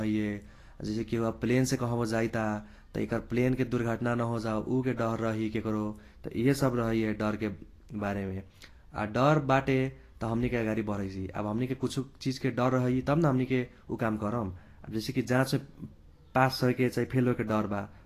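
From start to finish the speech carries Vorbis compression damage, likely from a low-quality encode in the region of 35 kbps. Nothing sounds above 14.2 kHz, and the treble that remains is grainy and hissy, as though fine detail had been swapped for noise of similar energy. Consonant attacks blur and tones roughen. Unlike a plain low-pass, which just dulls the top, the band below the cut-off is itself coarse.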